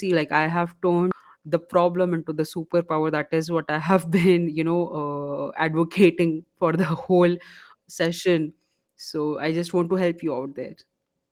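At 1.1 s, right after "like i have", there's a skip ahead: roughly 400 ms of speech got dropped while later audio was already queued, so playback jumps straight over it with no gap filled, and the join sounds abrupt.

Then from 1.28 to 3.97 s you get a jitter buffer speed-up. The buffer was holding too much, so the receiver kept trimming tiny pitch-period slices, about 200 ms in total, running the speech roughly 8% fast at unchanged pitch, which sounds a bit hurried.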